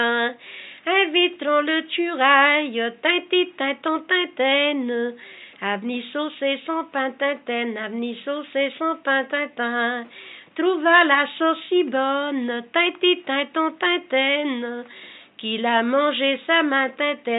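Nothing in the audio stands out as a technical fault; I can't pick out a single moment where something goes wrong.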